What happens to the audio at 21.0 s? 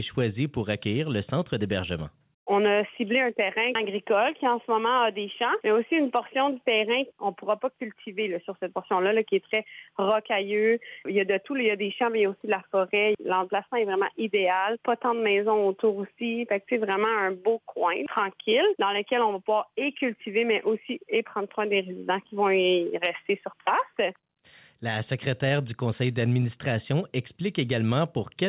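At 21.0 s you're hearing gain pumping, which runs through the whole clip rather than starting there. The level keeps breathing, with the gain swinging by roughly 5 dB, so loud and soft parts sit squashed together. The likely cause is input gain set far too hot, with a fast limiter or compressor clamping down on every peak. The top end also stops at 4 kHz, which fits a G.711 call path.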